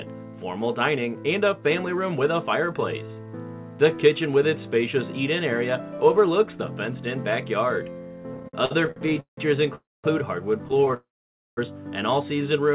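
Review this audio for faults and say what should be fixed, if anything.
Repeated stalls (stutter) occur from 8.34 to 9.39 s and again from 10.66 to 10.94 s. The audio keeps halting and restarting. The first run has 16 breaks totalling 435 ms, the longest 172 ms, so about 41% of that stretch is filler. The second has 9 short breaks totalling 83 ms, none longer than 15 ms. Each time, the jitter buffer emptied and the receiver stretched the last sound until more packets came, so the audio drags rather than losing anything. On a waveform this shows as repeated, smeared copies of the previous cycle. A spectrogram shows frozen horizontal smears with banding, all below 4 kHz, which fits the G.711 call path.

A call audio freeze runs from 9.75 to 10.06 s, adding about 0.28 s, and another from 10.94 to 11.59 s, adding about 0.63 s. The second begins right where the stutter ends. In both, a short fading buzz or hiss trails off into silence, about 0.22 s and 0.53 s of it respectively, before the sound resumes where it stopped. 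The likely cause is packets held up in transit, which emptied the buffer. On a waveform each one is a brief decaying tail followed by a flat line. On a spectrogram it is a fading smear, then a blank column.

To prevent both, fix the network delay and jitter on the route, and give the jitter buffer more headroom.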